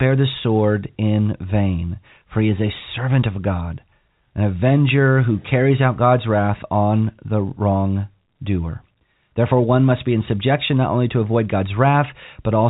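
Nothing in this speech recording stands out as a fault.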